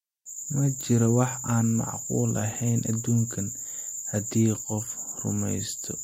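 No technical faults can be heard in the speech, so there is nothing to describe in time order.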